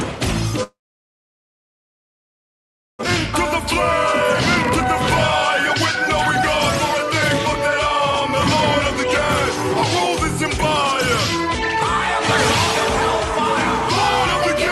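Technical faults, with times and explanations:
0.63 to 3.05 s, long network dropout: the sound breaks off, a brief fading buzz stretches the last moment, then about 2.25 s of near silence follows, and roughly 1.6 s of material never returns. Packets likely stopped arriving, so the receiver concealed the gap, gave up, and resumed with timing shifted by around 0.7 s. A waveform shows a flat, empty stretch. A spectrogram shows a smeared tail dissolving into a dark band.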